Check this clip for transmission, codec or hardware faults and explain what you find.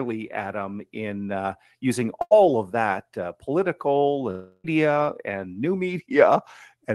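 Two transmission faults are audible in the speech. Both come from lost network audio.

A burst of packet loss occurs at 2.21 to 2.33 s, just after "in uh using". Roughly 0.1 s of audio never arrived in time. The receiver filled the gap by extending the last sound for about 94 ms and fading it. You hear a short held buzz or hiss instead of real speech. Then the voice resumes at "of that uh political", with the lost part skipped.

A longer gap, most likely a network dropout, runs from 4.31 to 4.66 s, right after "of that uh political". About 0.34 s of speech is missing. The receiver stretched the last sound for roughly a third of a second, so it becomes a buzz or hiss that fades away. A very brief silence follows before speech returns at "and new". The words spoken in between are simply gone.

The call path's coding is audible too. The top end stops near 12 kHz, which fits an Opus codec at a low bitrate.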